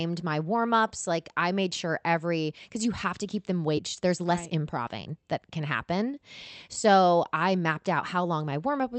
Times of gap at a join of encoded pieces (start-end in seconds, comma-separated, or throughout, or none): none